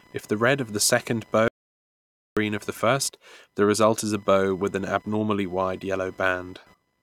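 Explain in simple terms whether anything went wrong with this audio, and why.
An audio dropout to silence runs from 1.48 to 2.37 seconds, right after "red of the second". For almost nine-tenths of a second the speech vanishes into total silence, with not even the faint background of the room left, and it resumes at "of the first the". The input was most likely lost briefly, through a loose connection, a failed link or an accidental mute, while the recorder kept saving nothing but silence, so whatever was said then is gone.

Computer activity noise sits under the whole clip: a faint, rapid buzz pulsing roughly a thousand times a second. It follows what the computer is doing rather than the speech. Work by the processor, graphics card or mouse disturbs the electrical ground that the audio circuit shares, and that disturbance leaks into the recording as this buzzing.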